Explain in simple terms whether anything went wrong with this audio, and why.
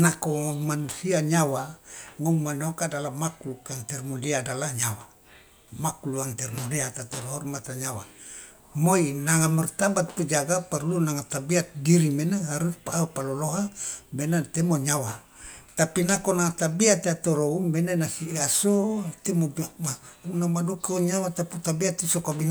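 Nothing went wrong here; the speech comes through with no glitches, dropouts or odd sounds anywhere to point to.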